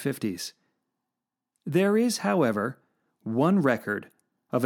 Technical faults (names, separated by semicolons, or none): none